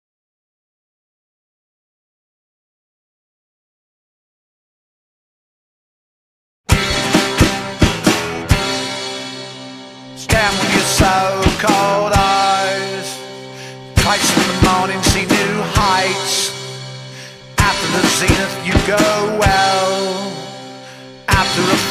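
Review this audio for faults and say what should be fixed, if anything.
Nothing stood out on listening, so there is nothing here that needs fixing.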